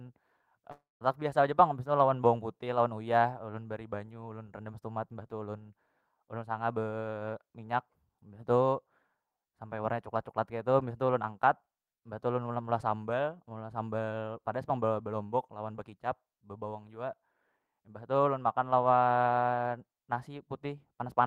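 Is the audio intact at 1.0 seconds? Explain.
No. A long network dropout runs from 0.71 to 1.03 s. The stream likely stalled, so the last sound fades as a buzz or hiss, then goes silent for 190 ms.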